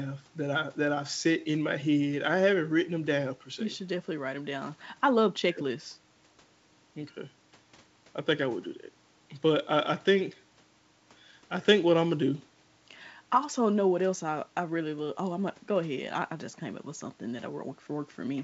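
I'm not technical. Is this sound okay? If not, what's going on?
Yes, nothing is wrong with this speech recording.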